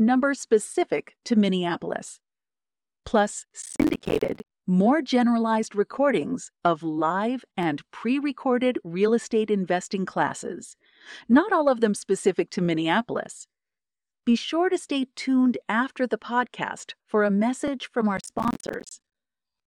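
A speech recording with two kinds of fault. From 3.62 to 4.51 s, just before "more generalized recordings of", and again from 18.17 to 19.15 s, a gritty, broken crackle rides on the voice and then stops. This is processor overload crackle: the processor repeatedly failed to fill its audio buffers in time, and each missed buffer dropped out to silence with hard edges. The rate of the tearing fits buffers of around 10 ms, with dozens missed in each burst. Separately, a short stutter or click comes every 5 s, at 7.63–7.65 s (between "generalized recordings of live" and "pre recorded real estate"), at 12.65–12.68 s, and at 17.68–17.70 s (after "the podcast for a"). These are overlapping chunks: the audio was handled in 5 s chunks, and each one began slightly before the previous one ended, so about 23 ms of sound plays twice at every join.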